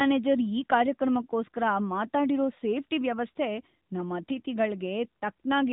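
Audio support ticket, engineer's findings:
AMR narrowband mobile codec, whole clip, speech. Hard band limit: nothing above 4 kHz, so sibilants dull and muffled. Plainly audible buzzy, synthetic texture from the pulse-excited vocal-tract model in 20 ms frames. Damage level fits a mid-rate AMR-NB mode around 10 kbps. Component: mobile voice path or 2G/3G transcode stage.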